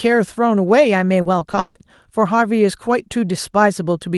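From 1.21 to 1.77 s, repeated packet loss leaves five gaps. Each is filled by repeating the last sound. The speech turns choppy.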